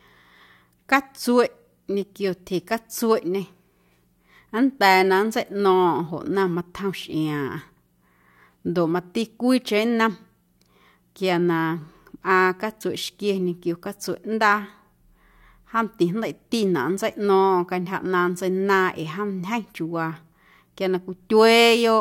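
Nothing in the speech stood out as a technical problem on listening.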